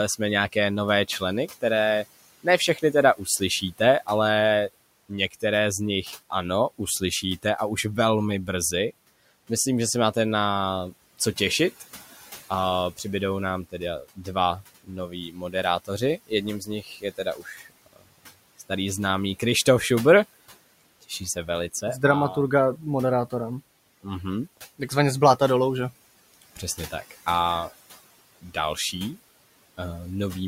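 Speech cut by the noise suppressor occurs from 0.18 to 4.08 s, 5.09 to 7.45 s, 8.47 to 19.42 s (after "a už velmi"), 23.3 to 25.41 s (between "dramaturga a" and "dolů že"), and 26.34 to 27.27 s (after "dolů že"). The suppressor mistakes quiet speech for the room noise, which sits about 22 to 26 dB below the talker, and pulls it down by about 13 to 19 dB. Word endings and soft consonants sound swallowed, worst in the long 8.47 s stretch, where roughly one and a half seconds fade.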